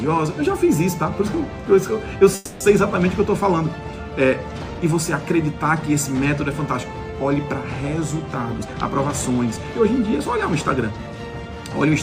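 At 2.35 s the sound stalls until 2.63 s. It is held as a fading buzz or hiss for about 250 ms and then resumes exactly where it stopped, with nothing lost. This is a call audio freeze, likely from delayed packets draining the jitter buffer, and it leaves a gap that shifts the remaining audio a quarter-second later.

From 8.58 s to 11.07 s the audio plays at roughly 110% speed with unchanged pitch, sounding hurried. This is a jitter buffer speed-up: the receiver repeatedly trimmed short pitch-period segments, about 0.3 s in total, to recover the built-up delay.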